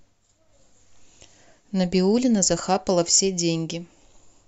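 Listening through the speech, nothing stood out as a technical fault at any point.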